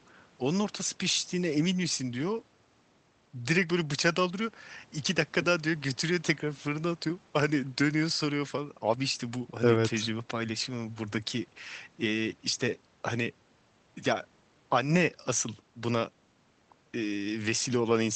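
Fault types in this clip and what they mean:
No fault types are present in this clip.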